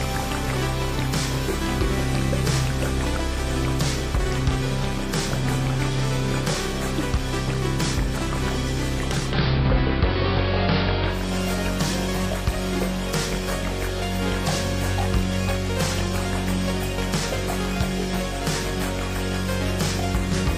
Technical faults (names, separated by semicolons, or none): digital radio blending to analogue